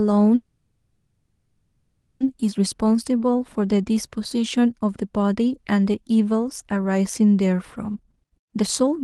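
From 0.35 to 2.22 s the speech stalls: the last sound drags on as a fading buzz, drops to about 60 ms of silence, then resumes exactly where it stopped. This call audio freeze was likely caused by delayed packets draining the jitter buffer, inserting a 1.85 s gap without losing anything.

Between 2.41 and 2.73 s the speech sounds slightly hurried at unchanged pitch, running at 111% speed. This jitter buffer speed-up comes from the receiver trimming a few pitch periods at a time, about 50 ms in total, to cut the excess buffered delay.

From 2.78 to 3.04 s the speech drags a little, running at 87% speed with drawn-out sounds at the same pitch. In this jitter buffer slow-down the receiver repeats single pitch periods, adding 40 ms to build up a reserve.

From 7.95 s to the end at 9.03 s a second jitter buffer speed-up is much stronger. The speech becomes clearly rushed at 137% speed while keeping its pitch, with roughly 400 ms cut out in short pitch-period pieces to shrink the excess buffered delay.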